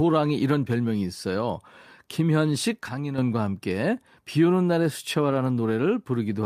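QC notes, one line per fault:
2.89–3.18 s, sudden gain jump: Sound and background noise drop together by about 8 dB with no fade. This is likely a gain step applied without a ramp.
5.29–5.35 s, lost packet rebuilt from error correction: There is no gap, but about 40 ms sounds rougher and noisier. This fits two lost packets replayed from low-bitrate copies.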